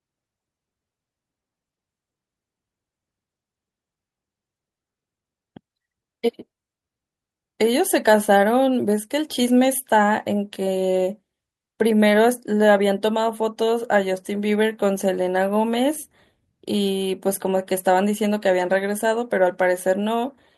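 A speech recording with no technical faults to report.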